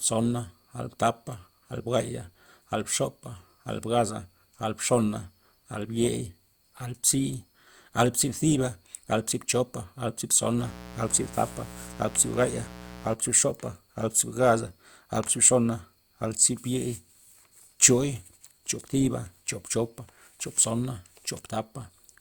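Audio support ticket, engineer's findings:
Mains buzz, 10.57 to 13.17 s, 60 Hz family. Steady raspy buzz under the speech, well below it. Probable dimmer, rectifier or unshielded cable. Switching spikes twice per cycle add harmonics into the kHz range. Spectrogram: evenly spaced horizontal lines at 60 Hz multiples, ending at 13.17 s. Waveform: sharp periodic spikes at 120 per second.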